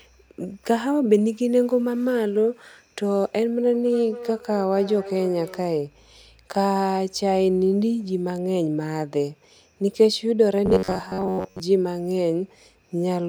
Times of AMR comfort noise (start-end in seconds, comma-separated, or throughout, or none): none